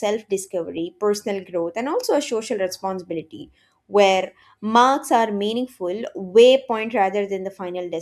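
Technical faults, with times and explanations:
No technical faults can be heard anywhere in this speech recording.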